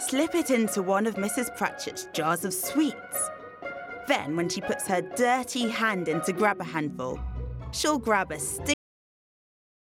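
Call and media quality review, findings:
Cut-off end at 8.74 s: sound stops mid-event, straight to digital silence with no decay. Final buffers never written or played out, so nothing follows.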